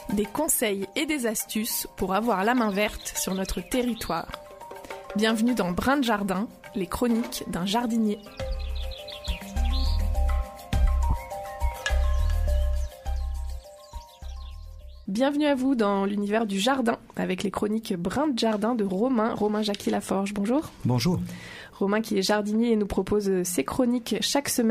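Bluetooth LE Audio frames went missing around 11.10 to 11.13 s, a gap of 30 ms that fits three consecutive 10 ms LC3 frames. With no data arriving, the LC3 decoder filled the hole by repeating the last good spectrum with its signs randomised. Instead of a clean dropout, the audio turns briefly into a grainy, noise-like smear that keeps the rough tonal colour of what came before, then picks up again once real frames resume.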